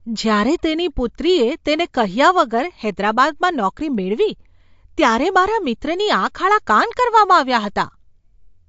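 Throughout the whole clip, the speech carries plainly audible damage from what is likely MP3 compression. Nothing survives above 7.6 kHz, a hard treble cut that fits an encoder starved of bits, at something like 53 kbps. With so little to spend, the encoder drops weak frequency lines, and they flicker in and out from frame to frame. That gives the speech a watery, swirly texture, with smeared consonant attacks and dull, clipped s sounds.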